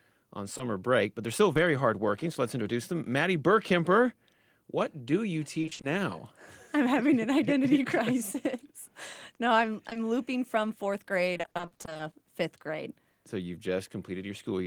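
At 0.57 to 0.61 s, just before "break but they're still", and again at 1.53 to 1.57 s, there is short concealed packet loss: about 20 ms of audio never arrived, and the decoder bridged it by extending the preceding sound before rejoining the real signal. Each is a single brief smear or wobble. At 9.89 to 9.97 s two such losses sit back to back and give a slightly longer smudge. Each is still an isolated event in otherwise continuous sound.

From 5.61 to 5.85 s, right after "what do you", the character changes to repeated packet loss with robotic sound. Roughly six 20 ms holes, which fits 20 ms packets, are patched one after another, so half of that stretch is synthesized. A longer run from 11.33 to 12.01 s, between "looping from fourth" and "fifth grade", has about seventeen holes. What separates these from the single losses is the rapid recurrence: the patches pile up into choppy sound with pieces missing rather than one momentary blip.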